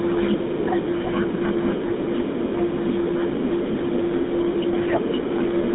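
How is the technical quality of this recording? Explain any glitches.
Quality is limited throughout by GSM full-rate coding, with one short burst of GSM bit errors.

The GSM full-rate codec affects the whole clip. The speech is confined to roughly 150 Hz to 3.7 kHz. It has the buzzy, gravelly roughness of a coarse pulse-driven vocal-tract model, which fits the 13 kbps GSM full-rate codec. The coding damage is plainly audible.

GSM bit errors occur from 1.02 to 1.12 s. Corrupted filter, pitch or gain values derail the decoder for roughly 100 ms, which fits about six 20 ms frames. The speech breaks into squawks, pops and gargling there.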